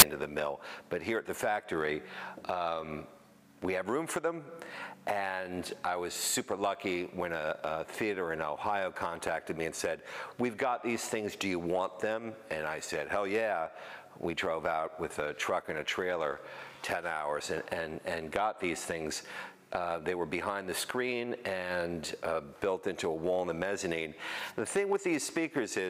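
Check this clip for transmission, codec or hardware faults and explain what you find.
One fault is present, right at the start. From 0 to 0.02 s, file tags are played as audio. Compressed picture data stored with the file is decoded as samples. It comes out as a short burst of very loud white noise with hard edges.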